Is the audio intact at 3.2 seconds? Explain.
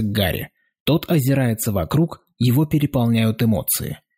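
Yes, the audio is intact at 3.2 seconds, with no dropout, glitch or other fault audible at that point.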